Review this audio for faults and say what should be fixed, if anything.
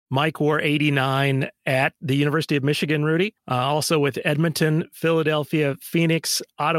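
Nothing to fix: no faults are audible anywhere in the speech recording, so no corrective or preventive action is needed.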